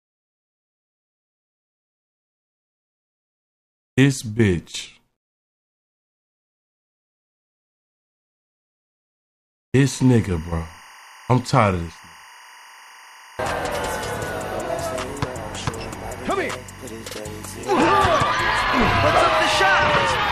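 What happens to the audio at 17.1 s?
Timecode bleed runs from 9.82 to 17.82 s. Leaked 23.976 fps linear timecode adds a chirping warble around 1 and 2 kHz, about 25 dB down, visible as steady spectrogram bands.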